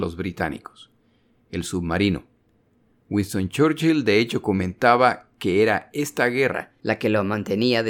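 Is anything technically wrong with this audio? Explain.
Yes. A section at the wrong speed runs from 6.52 s to the end of the clip. That stretch plays back 1.13 times faster than it was recorded, likely because it was fitted to the wrong clock, so the speech there suddenly hurries and rises by about two semitones.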